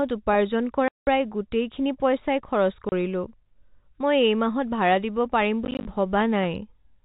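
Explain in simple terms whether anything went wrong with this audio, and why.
Packet loss filled with silence cuts holes in the speech at three points. From 0.88 to 1.07 s, just before "গোটেইখিনি পইচাই", about 0.19 s drops out. At 2.89 to 2.92 s a brief 30 ms gap follows. After "দিব পাৰিম", from 5.65 to 5.85 s, several short gaps of up to 20 ms are scattered. Missing pieces of the transmission were replaced with silence, and the gap sizes fit 10 ms packets. Each hole has abrupt edges. The telephone-band sound itself is simply the phone format working as designed.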